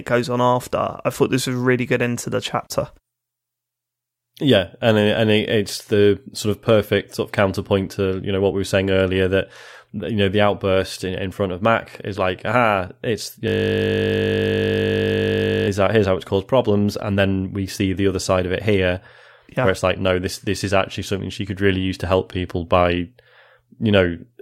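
Speech recording with a system hang loop from 13.48 to 15.68 s: a 20 ms buffer repeats about 110 times, producing a steady 50 Hz buzz.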